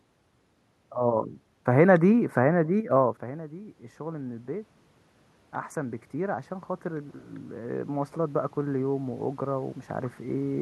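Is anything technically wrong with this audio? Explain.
Yes, there's automatic gain rising twice, from 2.69 to 4.77 s and from 5.74 to 10.57 s. The input drops by about 16 dB, so the AGC slowly cranks up gain, about 4 dB then about 7 dB, and the speech and room noise swell together. The first swell follows the talker moving around 3 s.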